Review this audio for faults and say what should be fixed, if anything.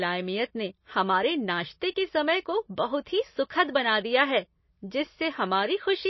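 MP3 compression runs throughout the clip. The speech has nothing above 5.8 kHz and a plainly audible watery, swirling texture. This is likely an encoder starved of bits, fitting a bitrate near 24 kbps, which chops the treble and lets weak frequency lines flicker between frames. To prevent it, export from the original source at a much higher bitrate or in an uncompressed format.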